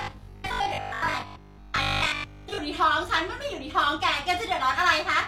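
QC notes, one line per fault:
0.02 to 2.58 s, robotic sound from repeated short buffers. The speech turns into a rigid metallic buzz near 50 Hz that still roughly tracks the words. Most of the stretch is likely looped audio, repeating about 20 ms chunks while real audio is skipped.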